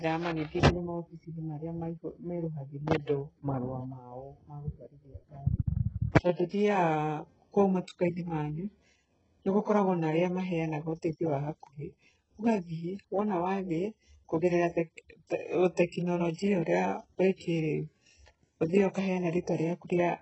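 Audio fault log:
Throughout: HE-AAC compression, likely. Nothing above 8 kHz, heavily rebuilt treble from copied lower bands, which fits a very low bitrate; sibilants sound gritty, metallic or lispy.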